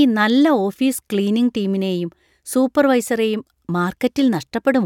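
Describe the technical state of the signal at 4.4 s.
At 4.4 s the speech signal is intact, with no dropout, distortion, glitch or other audible fault.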